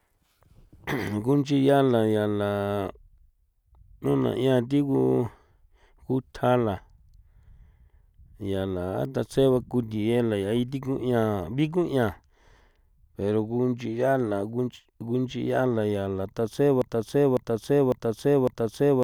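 At 16.82 s the speech falls into a broken-record loop: a 0.55 s fragment plays four times back to back and runs right to the end. The player or stream likely stalled and kept resending its last chunk, so whatever came next is gone.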